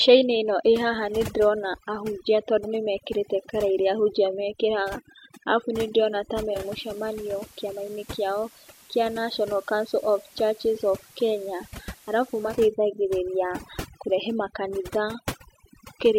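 From the start and through the whole clip, the speech has been through overdone noise removal. The reduction was set so hard that frequency bands near the noise estimate were pulled down to nothing, taking the quieter parts of the voice with them. Pauses sit at near silence, sprinkled with twinkling specks. On a spectrogram the background looks like a dark field dotted with isolated bright cells, and the weaker harmonics of the voice break up into patches.

Just after "mekĩraga arabu nĩ ndĩrona", at 6.46 s, a digital radio blend to analogue FM takes over. The receiver lost the digital stream and cross-faded over about 214 ms to the station's FM broadcast. The level drops by about 3 dB, and a hiss comes up roughly 25 dB under the speech. On the spectrogram a faint, even noise floor fills the band. The waveform steps down slightly in height. At 12.64 s the receiver blends back to digital.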